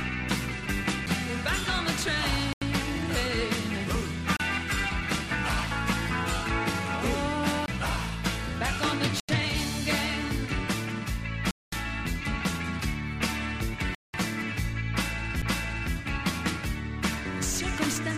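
At 1.06 s, 7.66 to 7.68 s and 15.42 s, a CD skip makes the laser jump to another turn of the spiral, giving a very brief tick-like mute and an abrupt jump in the sound. In between, at 2.53, 4.37, 9.20, 11.51 and 13.95 s, the sound drops to silence for 87, 32, 87, 215 and 192 ms before resuming, likely a Bluetooth stall where the headphone buffer ran dry.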